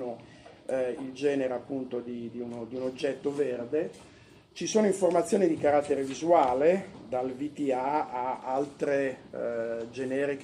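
Nothing is technically wrong with this audio.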